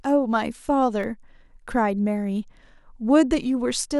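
At 1.03 s the speech drops into a block of digital silence lasting about 1.5 ms, which fits one unfilled 64-sample buffer. The abrupt cut out and back makes a brief tick or dip, not a faded dropout or an audible hole.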